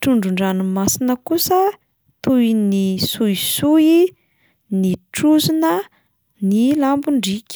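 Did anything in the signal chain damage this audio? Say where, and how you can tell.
No, nothing in the signal chain damaged this audio.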